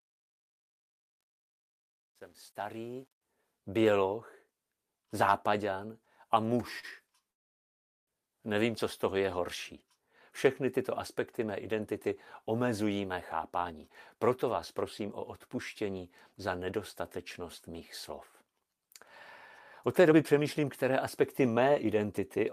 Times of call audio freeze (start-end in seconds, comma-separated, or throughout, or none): 7.31-8.10